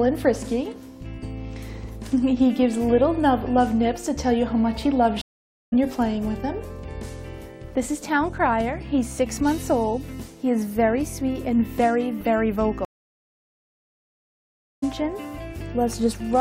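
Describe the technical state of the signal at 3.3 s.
At 3.3 s the signal is intact, with no dropout, distortion, glitch or other fault audible at that point.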